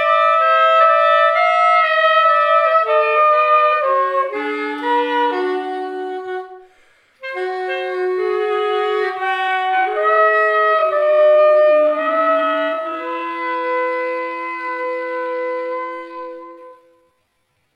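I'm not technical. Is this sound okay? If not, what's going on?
No. From 9.43 s to the end, there's a time-stretched section. The sound abruptly drops to about half speed but keeps its pitch, so it drags. Software likely stretched it to fill a length by repeating tiny pieces.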